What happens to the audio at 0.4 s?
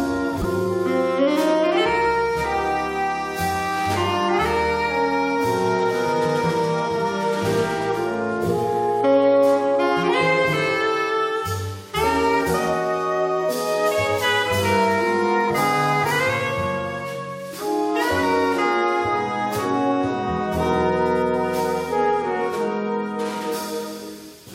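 Right around 0.41 to 0.44 s there's a corrupt frame decoded: a single compressed frame got some bits flipped, and the decoder went ahead and played it. The misread gains and codes dump energy at frequencies that don't belong there for about 30 ms, roughly one frame's worth. It comes out as a quick blip or burst of noise, peaking around -10 dBFS.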